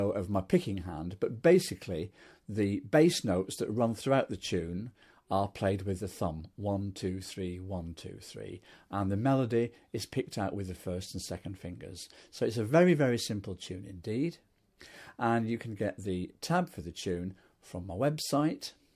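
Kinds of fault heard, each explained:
Listening through the clip, nothing stood out as a technical problem.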